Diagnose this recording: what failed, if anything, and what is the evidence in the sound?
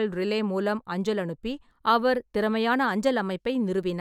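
Nothing failed; no fault is audible anywhere.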